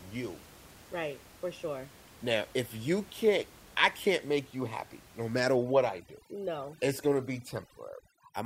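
A speech clip with overdone noise removal from 5.56 s, just after "you happy no matter", to the end: the background drops and breaks up into twinkling specks. A noise reducer set far too strong is gating individual frequency bands wherever they approach its noise estimate, taking quiet parts of the voice along. Before 5.56 s the room noise sits about 24 dB below the speech. On a spectrogram that steady haze gives way to scattered isolated dots between words and ragged, gappy speech harmonics, while the waveform's floor drops almost flat.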